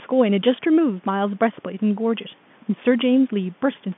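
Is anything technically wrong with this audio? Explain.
No, nothing is technically wrong: this is speech carried over a G.711 telephone line, so it occupies the normal narrow band of roughly 150 Hz to 3.5 kHz with nothing above about 3.8 kHz, as the call's microphone processing and telephone coding are expected to leave it.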